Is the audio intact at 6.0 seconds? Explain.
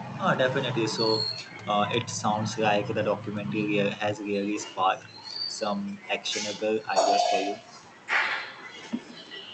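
No. At 6.0 seconds, as throughout the clip, there is echo with no canceller: the far end's loudspeaker feeds its microphone unchecked, so the speech returns roughly 150 ms later as a quieter copy, about 13 dB down, sounding thin behind each phrase.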